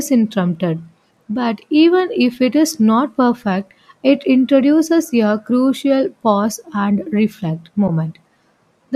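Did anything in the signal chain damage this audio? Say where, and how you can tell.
Yes. The damage is at the codec and network stage: AAC frame loss with muting at 7.88 s, just after "crucial pause and reflect". The sound fades out and back in over a short span, leaving a brief dip. That fits one lost frame of about 10 ms. The decoder zeroed the missing spectrum, and the overlapping windows smoothed the edges. The short frame length points to low-delay AAC, likely AAC-ELD, as the codec.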